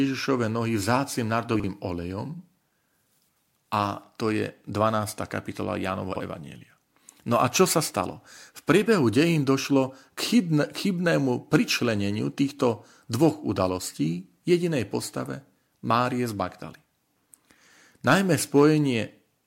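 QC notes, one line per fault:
1.56–1.64 s and 6.12–6.20 s, chunks out of order: a 40 ms slice plays one slot late each time, so the sound jumbles briefly across the hard joins.
13.23–13.26 s and 18.08–18.14 s, hard clipping: peaks get flattened, by about 1 dB at the first and about 5 dB at the second, so there's a brief crackle, harsher at 18.1 s.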